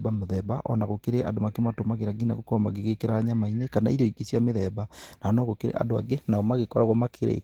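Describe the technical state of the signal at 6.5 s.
At 6.5 s you're in the middle of a clock drift between sender and receiver that runs through the whole speech clip. The sending side's clock is running fast, by somewhere around 4 percent, so samples arrive quicker than the receiver plays them out. The jitter buffer keeps filling up instead of holding steady, and the receiver has to shed material to stop it overflowing. You hear that as a faint rushed, slightly unsteady quality in the timing.

That shedding is the second fault, repeated timing corrections, which runs from 0.07 s to 7.39 s, so 6.5 s is well inside it. Because the sender is ahead, every correction goes the same way: the receiver trims out short slivers of audio, giving an effective pace of about 104 percent. The cuts are small and unevenly spaced, so around 6.5 s they come across as little hiccups or a tempo that doesn't sit quite still.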